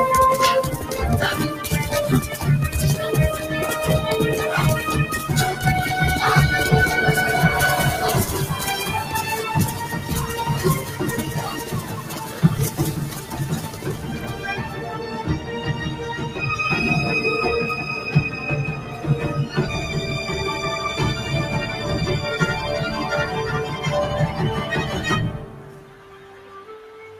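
A speech-tuned noise suppressor applied to music or sounds has been left running here, so steady material and tails keep getting pulled down by around 10 dB, making the level pump and thin. The noise suppressor cuts the sound hardest, by about 5 to 6 dB, at 10.81–11.01, 11.61–12.43, 13.0–14.44, 14.64–15.5, 15.67–16.05, 18.7–19.04 s and from 25.32 s to the end, where held parts sink while attacks survive.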